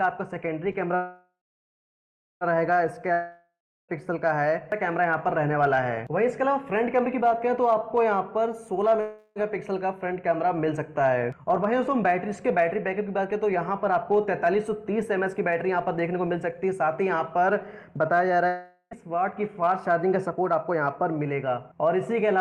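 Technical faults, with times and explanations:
0.95–2.44 s, call audio freeze: the sound stalls and is carried on as a fading buzz, then about a second of silence, and it picks up right where it left off. Likely the packets were held up and the jitter buffer ran dry, so nothing's lost, just a gap of about 1.46 s inserted.
3.13–3.92 s, long network dropout: the last sound hangs on as a decaying hiss, goes quiet for about a third of a second, then jumps ahead with roughly 0.76 s of the audio simply gone. Likely packets never arrived at all, so the receiver could only fill and then skip.
9.01–9.39 s, call audio freeze: a shorter stall, about 0.35 s of stretched, buzzy continuation with no real silence before the audio resumes from the same point. Likely another brief packet delay; everything's still there, just pushed later.
14.04–17.34 s, jitter buffer speed-up: the sound runs about 7% fast at unchanged pitch and feels a bit rushed. 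The buffer had built up extra delay, so the receiver trimmed tiny pitch-period slices again and again, about a fifth of a second in total.
18.47–18.94 s, long network dropout: a quick fading tail, a very brief hush, then the audio comes back further on with about half a second missing. Likely a burst of lost packets.
18.95–20.74 s, jitter buffer speed-up: straight after that dropout it hurries along at about 8% fast, same pitch, as the buffer sheds roughly 0.15 s of built-up delay by snipping short pitch-period pieces in quick succession.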